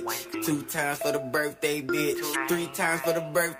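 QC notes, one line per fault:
0.30–0.35 s and 2.31–2.36 s, damaged data in a compressed stream: corrupted bytes in the encoded stream left the decoder misreading frames, losing sync and hunting for the next valid frame header. Each 44 ms stretch is heard as a brief chirp, squawk, click or gap.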